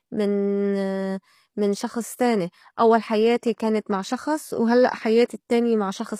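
Throughout the speech, the treble sounds synthetic, with s sounds turning gritty and lispy. That points to HE-AAC compression, likely at a low bitrate around 24 kbps, where upper bands are copied up from lower ones and misaligned harmonics at the crossover sound metallic.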